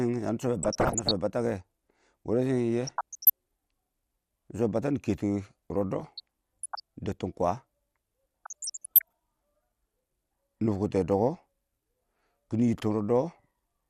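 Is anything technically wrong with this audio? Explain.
Yes, there are two faults in this speech clip.

Throughout, the speech sounds dull and plainly gurgly, with a granular roughness. This is MP2 compression, likely at a low rate, and the damage fits about 80 kbps. Layer II divides the signal into 32 sub-bands and shares out bits among them. At this rate the upper bands keep dropping out and coming back. The bands that remain are coarsely quantised, which gives the grainy texture.

DAB burbling occurs four times: 0.63 to 1.12 s, 2.87 to 3.30 s, 6.01 to 6.80 s, and 8.45 to 9.13 s. In each stretch, the speech burbles with short blips of noise. The cause is bit errors that slip past error correction into the MP2 data. Corrupted samples put short blips of noise into single sub-bands, and corrupted scale factors make sub-bands jump in level for up to a frame. The error rate is below one percent in most stretches and reaches about one percent in the last.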